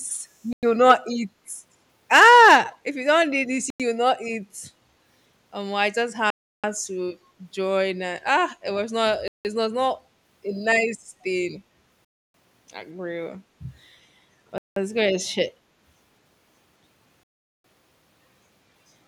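The speech drops to dead silence at 0.53 s for 100 ms, then resumes where it left off. That's a Bluetooth stall, most likely the headphones' buffer running dry while interference held packets up, so playback just paused.

From 2.64 to 2.77 s there's an echo leak: a faint copy of the speech trails about 230 ms behind, roughly 15 dB down. That's likely a far-end speakerphone whose echo canceller let some of its own playback back into the mic.

The same stall dropouts then return at 3.70 s (96 ms), 6.30 s (334 ms), 9.28 s (171 ms), 12.05 s (295 ms), 14.58 s (183 ms) and 17.23 s (410 ms).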